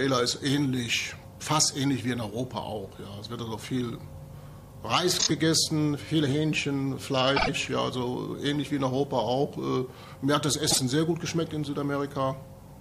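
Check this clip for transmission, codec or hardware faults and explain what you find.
Three faults are audible, all repeated frames. At 5.19 to 5.31 s, a 26.1 ms block plays three extra times. At 7.36 to 7.49 s, a 52.2 ms block repeats twice. At 10.70 to 10.78 s, a 52.2 ms block repeats once. A stretch of compressed audio was written or sent again, so the decoder replays it. Each is heard as a stutter. The clip gains 78.4, 104.5 and 52.2 ms. The block lengths fit one and two codec frames of about 26 ms each.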